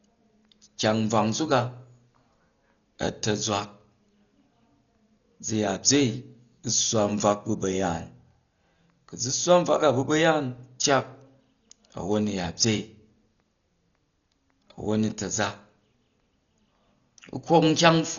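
Dolby Digital compression, likely the cause, runs from start to finish: heavy coding damage that fits a bitrate around 40 kbps. Starved of bits, the encoder cut the band at 6.9 kHz and left many frequency lines to be filled with dither, so the speech sounds dull, with rough, fluttering noise.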